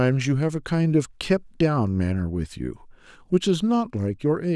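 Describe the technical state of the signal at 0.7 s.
At 0.7 s the speech signal is intact, with no dropout, distortion, glitch or other technical fault audible at that point.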